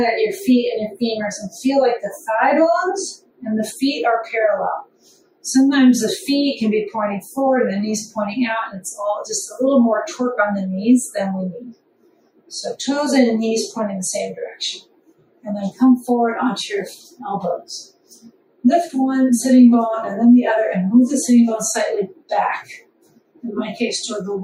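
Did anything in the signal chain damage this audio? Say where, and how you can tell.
Yes, at the call-processing stage: a noise suppressor tuned for speech was left running on this sound throughout. It treats sustained content and tails as noise, so gain swings by roughly 15 dB and the sound pumps. The waveform envelope breathes independently of the material.

Sound was cut by the noise suppressor at 3.17–3.45, 4.84–5.44, 11.66–12.51, 14.81–15.46, 16.97–17.21, 17.85–18.64, 22.08–22.31 and 22.79–23.44 s. Levels drop about 18 dB, or about 14 dB at 16.97 s. A spectrogram shows held components darkening while onsets stay bright.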